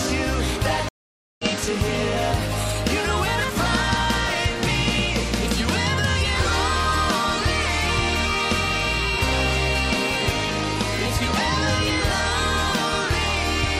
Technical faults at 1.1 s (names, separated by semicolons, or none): stream reconnect